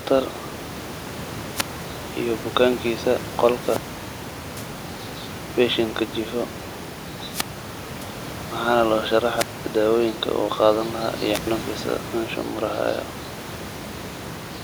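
A brief swell of hiss, then a near-silent hole, cuts the speech at 1.52–1.85 s, 3.57–4.70 s, 7.28–8.08 s, 9.36–9.65 s and 11.32–11.47 s, with holes from 0.1 s to 0.8 s. This is wireless microphone squelch dropout: the radio signal fades until the receiver's squelch mutes the output.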